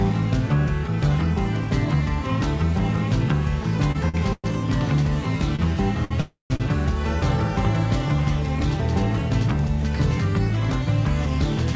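From 3.92 to 4.46 s the sound drags and hiccups, catching on itself four times as it is held and then released, the longest hold about 109 ms, together filling roughly a third of that half-second. These are repeated stalls (stutter): packets kept reaching the receiver late, its jitter buffer kept running dry, and each time it extended the last sound until data arrived, so the audio lingers rather than losing anything.

At 5.56 s, 6.05 s and 6.56 s a single sound hangs on a moment too long with a faint buzz or dip, lasting 28 ms, 60 ms and 36 ms respectively. Each is a short stall from a late packet: one packet was missing at its due time, the buffer emptied, and the receiver stretched what it already had until that packet came in, then resumed from exactly the same point.

Between them, from 6.21 to 6.52 s, the sound stops moving for about 295 ms. It carries on as a fading buzz or hiss, then goes quiet for about 140 ms before continuing where it left off. 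This is a call audio freeze, likely caused by packets being held up in transit long enough for the jitter buffer to drain completely. Throughout, the call codec's bandlimiting leaves nothing above 8 kHz, which fits G.722.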